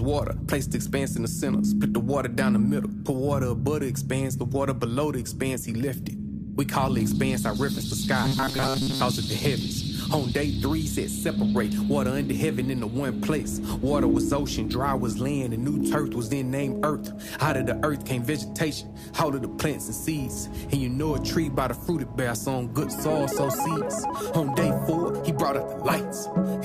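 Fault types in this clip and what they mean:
robotic sound from repeated short buffers: audio likely arrived too seldom, so a 7.5 ms chunk repeated, imposing a rigid metallic 133 Hz buzz from 8.24 to 9.01 s.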